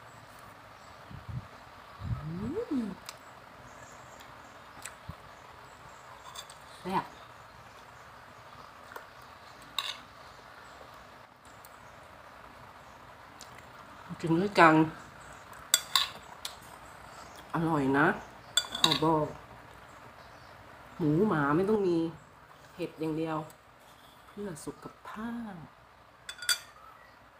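From 11.25 to 11.45 s and from 21.76 s onward, level abruptly drops about 6 dB, likely one channel dropping out. The waveform envelope halves.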